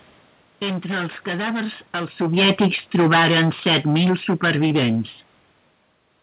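Automatic gain falling from 2.2 to 5.04 s: the gain control judged the input too loud or its background too strong and lowered its gain gradually by about 4 dB over nearly three seconds. The speech and the room background sink together, starting just after the talker shifts position around 2 s.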